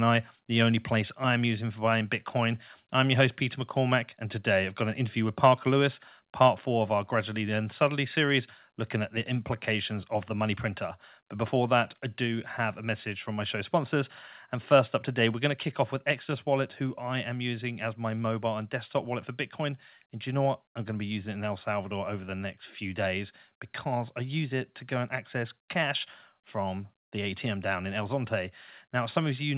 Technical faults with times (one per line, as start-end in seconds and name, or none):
6.48 microphone volume stepped down
15.51 microphone volume stepped down